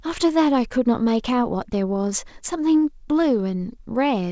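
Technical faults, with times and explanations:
Nothing stood out on listening to the speech, which comes through a call path whose content stops at about 8 kHz.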